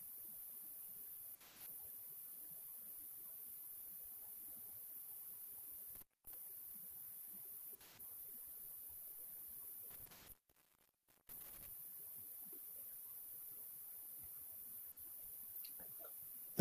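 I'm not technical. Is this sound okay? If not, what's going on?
No, there are two separate problems.

The first is AAC frame loss with concealment. The file is stored in small compressed chunks. A few went missing, and the player patched each gap by guessing from the sound just before it. Those patches sound smeared and noisy. This happens at 1.35 to 1.66 seconds (about 130 ms lost), 7.75 to 7.99 (about 85 ms), 10.07 to 10.28 (about 85 ms), and 14.92 to 14.96 (about 43 ms).

The second is an intermittent contact, most likely a loose cable or plug. The sound cuts out for a moment, with a crackle as it drops and returns. Only a faint hiss remains during the gap. This happens from 5.95 to 6.34 seconds, with the sound gone for about a quarter of a second. It happens again from 9.91 to 11.69 seconds, with the sound gone for about one second. One of the missing-chunk patches also falls inside that second dropout.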